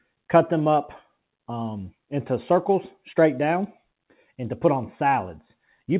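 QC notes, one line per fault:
No faults are heard anywhere in the clip. The sound carries the narrow band of a call path with a G.711 mu-law codec at 64 kbps, with nothing above 4 kHz.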